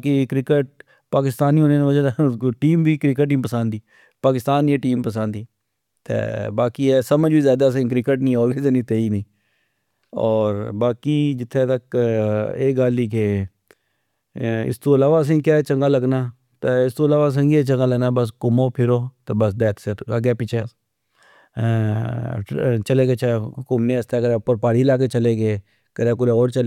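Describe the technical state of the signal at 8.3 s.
At 8.3 s the signal is intact, with no audible fault at that point in the speech.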